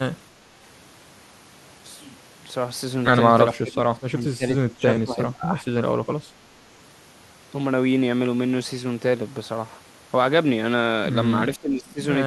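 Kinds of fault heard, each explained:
Speech suppressed in double talk: the speech ducks hard, roughly 20 dB at its deepest, at 3.52–4.44 s, 4.74–5.65 s and 11.56–12.0 s. It's likely an echo canceller clamping down while both ends talked, unable to separate this talker from loudspeaker echo.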